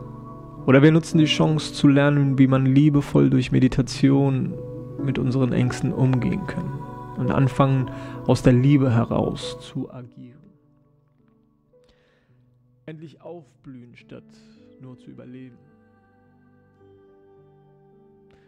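Zipper noise runs from 9.53 to 10.18 s. The level falls by roughly 25 dB there. It drops in coarse steps, around 70 a second, with no smoothing. Each step leaves a small click. Together they form a fast ticking over the fading sound.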